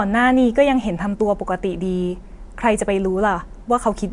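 No faults turn up anywhere in this speech recording; nothing in it calls for attention.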